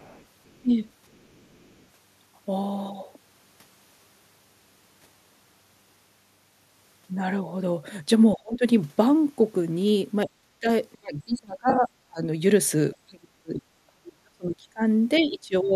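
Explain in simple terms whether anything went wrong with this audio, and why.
Yes, three things went wrong. The echo canceller likely missed some of the far end's audio, so other side's voice leaking through can be heard faintly from the start to 0.6 s and from 1.12 to 1.85 s.

When both sides spoke at once, the canceller likely turned the talker down too. This is speech suppressed in double talk, and the voice dips or cuts out at 0.62–0.85 s, 8.34–8.63 s, 10.26–12.23 s, 13.02–14.81 s, and from 15.19 s to the end.

A few audio packets went missing. With AAC frame loss with concealment, the decoder patched the gaps, leaving a brief smeared blip between 11.70 and 11.79 s.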